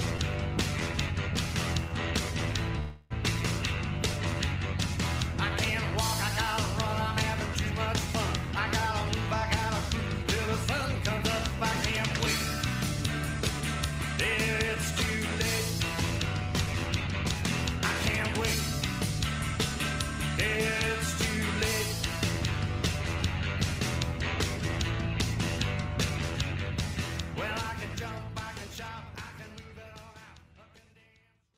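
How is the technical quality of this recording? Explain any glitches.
The recording has two kinds of glitch: one brief freeze and two stretches of sped-up playback.

At 2.79 s the sound stalls for about 0.31 s. The last sound is held as a fading buzz or hiss, then the audio resumes where it stopped. Nothing is lost. This is a call audio freeze, likely from delayed packets draining the jitter buffer.

From 10.23 to 11.23 s, and again from 13.61 to 19.59 s, playback runs about 4% fast at unchanged pitch. This is jitter buffer speed-up. The receiver cuts tiny pitch-period slices to shed excess delay, roughly 50 ms in the first stretch and about 200 ms in the second.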